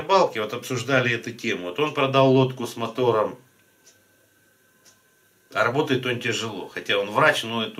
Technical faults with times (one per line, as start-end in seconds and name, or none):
none